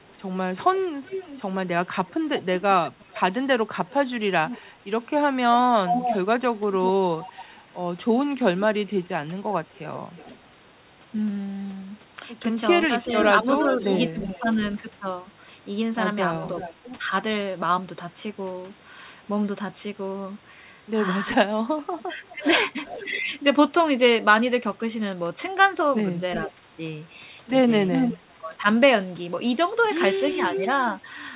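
From 0.03 to 16.74 s, a delayed copy of the speech trails the talker by 365 ms, about 10 dB below it. This is an echo leak. The likely cause is a far end on loudspeaker whose echo canceller let its microphone pickup through. Inside that stretch, the speech suppressed in double talk appears three times. The voice dips briefly between 2.6 and 4.66 s, by around 10 dB. It dips between 9.04 and 9.38 s, again by around 10 dB. It dips between 13.04 and 14.46 s, by around 5 dB. Each dip is a tenth of a second or so. It sounds like the voice being pushed down in short pieces. The likely cause is the canceller mistaking the talker for its own echo while both sides overlap.

The echo returns from 21.27 to 23.06 s, now 384 ms late and about 15 dB down. It is fainter here.

From 26.42 to 30.63 s, it lags by 392 ms and arrives at about the same level as the speech. That makes a strong repeat.

From 26.46 to 28.43 s, the talker again ducks briefly, by around 5 dB, for about a tenth of a second in total.

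Throughout, the sound stops at 4 kHz, as expected from the G.711 call path.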